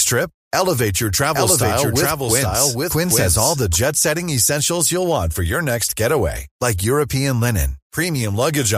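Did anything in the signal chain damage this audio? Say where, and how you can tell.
Yes. A second, slower capture path or an edit holding two out-of-step copies has likely mixed the speech in twice, producing a doubled audio track from 1.34 to 3.76 s, ending just before "setting essentials". The copy trails by roughly 700 ms at about the same level as the original, full-band and dry with no room colour, so it reads as a distinct repeat rather than an echo, and it switches on and off abruptly at both edges.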